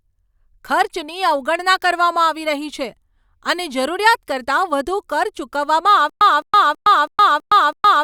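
From 6.10 s to the end, stutter with silent gaps: a 211 ms fragment repeats six times, each followed by about 115 ms of silence, likely a stalled stream retrying.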